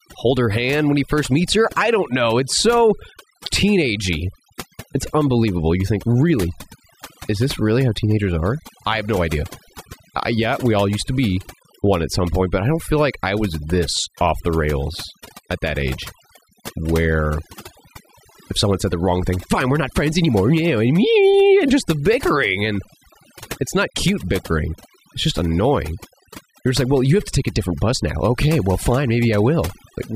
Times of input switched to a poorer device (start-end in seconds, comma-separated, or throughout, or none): none